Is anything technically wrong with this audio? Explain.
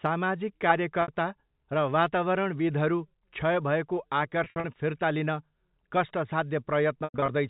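Yes. Packet loss with pitch repetition at 1.02–1.08 s (60 ms lost), 4.44–4.64 s (120 ms scattered over 200 ms), and 7.04–7.28 s (160 ms over 260 ms, longest gap 100 ms). The receiver fills each gap by repeating the last pitch period and fading it, which comes through as a brief held, buzzy tone over the band-limited telephone sound, fading into silence in the longer 100 ms gap.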